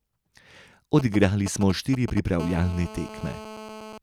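Speech, with a nearby 2G phone getting into the audio path twice. From 0.99 to 2.19 s you get GSM signalling bursts, a galloping dit-dit-dit of short 217 Hz buzzes, roughly 10 dB below the speech. Then from 2.40 to 3.98 s it settles into a steady GSM phone buzz, a raspy 217 Hz tone full of harmonics, about 16 dB below the speech, which is the phone's call-time burst rate being rectified by the circuitry.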